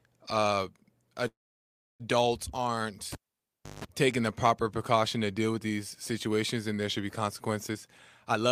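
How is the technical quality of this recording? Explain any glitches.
The recording has three kinds of glitch, one early, one in the middle, and a rushed stretch near the end.

From 1.27 to 2.02 s there's a call audio freeze. The sound stretches briefly, then drops to near silence for about 0.67 s before picking up where it left off. That's likely delayed packets draining the jitter buffer, with the receiver padding the wait. About 0.72 s of gap gets inserted, nothing is lost, and everything after runs that much later.

At 3.12 s you hear a pop, and the cable is pulled and plugged in again. The line goes close to silent for roughly 0.67 s, and within that there's a burst of 50 Hz mains buzz lasting about 0.17 s while the plug's tip makes contact before it seats. A second pop at 3.85 s brings the audio back, just before "taking the proper precaution".

Near the end there are two jitter buffer speed-ups, where the receiver trims excess buffered delay by cutting out tiny pitch-period-sized slices. 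From 7.70 to 7.88 s it runs at about 127% speed, shaving roughly 50 ms. From 8.28 s to the end it's much harsher, about 188%, removing around 200 ms. Pitch stays put, but the speech sounds hurried, and audibly rushed in that last bit.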